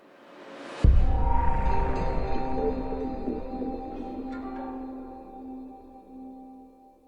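No technical faults are audible.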